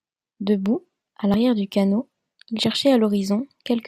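At 1.34 s the speech jumps just before "du canot il", and the same happens at 2.64 s just after "du canot il". Each sounds like a dropped buffer (overrun): the recording likely fell behind and was overwritten, losing roughly 70 ms and butting the edges together with no gap. A waveform shows an abrupt discontinuity; a spectrogram shows a thin vertical broadband line where the harmonics shift suddenly.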